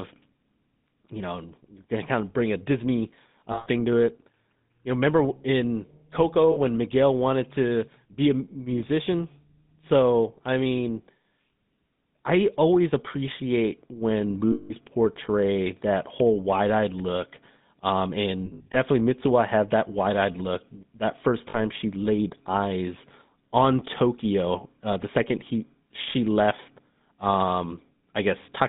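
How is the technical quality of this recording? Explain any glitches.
The quality is poor. The whole recording has passed through a low-bitrate phone codec, and it drops out briefly five times.

GSM full-rate codec: Throughout, the speech has been squeezed through the original GSM full-rate codec, which fits a rate of about 13 kbps. It rebuilds the voice from a vocal-tract model driven by a coarse pulse train, and the line passes only about 150 Hz to 3.7 kHz. The result is plainly audible: a muffled, narrow telephone sound with a buzzy, gravelly grain over every voiced stretch.

Lost GSM frames: At 3.52–3.67 s (just before "to it"), 6.52–6.58 s, 14.52–14.72 s (between "I always appreciate when" and "portray that whole"), 18.46–18.76 s and 21.50–21.57 s (before "she laid eyes on"), frames went missing. The decoder kept repeating the last good frame's settings at falling level. Each gap is heard as a held, metallic ring instead of the words. 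The longest gaps are 180 ms at 14.52 s and 140 ms at 3.52 s. At 18.46 s the losses are scattered across about 280 ms in short bursts, the longest run about 70 ms.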